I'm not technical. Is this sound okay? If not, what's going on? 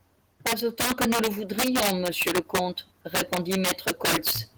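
No. Across the whole clip, the loudest parts of the speech break into sharp, violent cracks. This is integer overflow. The recording was pushed louder than the digital format can hold, and instead of stopping at the maximum, those peaks wrapped around to the opposite extreme. Only a small share of the loudest moments is affected. Ordinary clipping would sound flattened and fuzzy on loud syllables. These are harsher snaps. The speech's light voice compression is faint by comparison.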